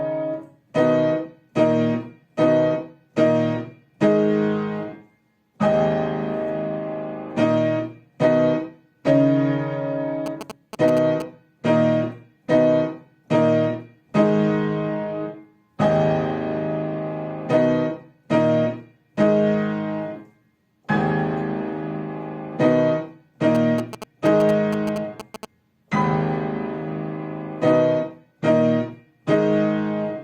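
GSM signalling bursts appear from 10.26 to 11.22 s and again from 23.55 to 25.45 s. A nearby 2G phone exchanging short bursts of control traffic induces radio energy that the audio circuitry rectifies into sound. The result is a galloping dit-dit-dit of brief buzzes at a 217 Hz repetition rate, sitting roughly 10 dB below the wanted signal in both stretches.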